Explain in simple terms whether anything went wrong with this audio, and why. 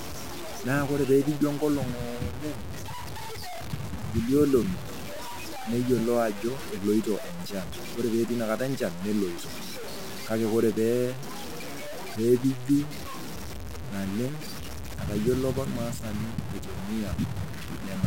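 Something did go wrong: the speech was likely stored with far too few steps of loudness and simply chopped down without dither. That low bit depth without dither leaves a rough, grainy buzz that clings to the voice from start to finish, with quieter moments crackling or dropping out.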